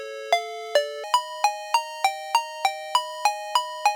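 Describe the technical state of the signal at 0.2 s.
At 0.2 s the signal is intact, with no audible fault at that moment.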